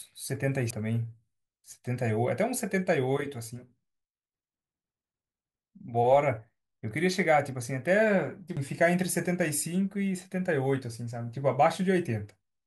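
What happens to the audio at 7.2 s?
Nothing goes wrong at 7.2 s; the speech continues intact through that moment with no dropout, click or distortion.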